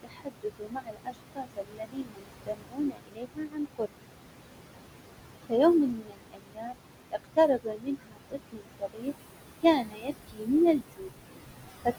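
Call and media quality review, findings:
Noise suppressor artifacts throughout: background pumps down about 21 dB in gaps and swells back under speech. Room noise, only about 7 dB below speech, is strong enough to drive hard per-band gating.

Speech cut by the noise suppressor at 0.03–3.93 s (roughly three seconds affected), 5.9–6.76 s, 7.11–9.13 s and 9.63–11.1 s: soft consonants and word endings classified as noise and dropped up to about 22 dB, so they sound swallowed or faint.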